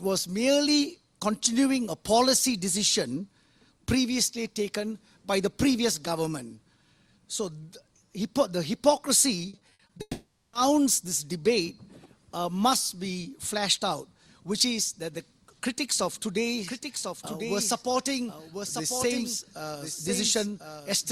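From 9.49 to 10.01 s the sound turns choppy and robotic, with pieces missing. This is repeated packet loss: seven short gaps, the longest 60 ms, were each patched by stretching the preceding sound, so concealment covers about 38% of that half-second.

Straight after, from 10.01 to 10.55 s, the sound smears into a fading buzz, drops to silence for a moment, then resumes with that portion gone. A long network dropout is the likely cause. Roughly half a second never arrived and was filled by extending the last sound.

From 16.67 s to the end, a second copy of the sound lags about a second behind the first, at roughly 5 dB quieter. It cuts in abruptly, with no decay or room colour. This is a doubled audio track, likely from a slower second capture path mixed in.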